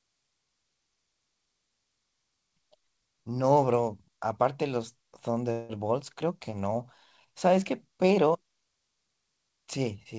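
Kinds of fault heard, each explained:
Call audio freeze: from 5.52 to 5.85 s the sound stalls into a fading buzz or hiss, likely a jitter buffer running empty. About 173 ms is filled in and nothing lost, so later audio runs 173 ms late. Spectrograms show frozen, smeared bands; the waveform shows a decaying repetitive stretch.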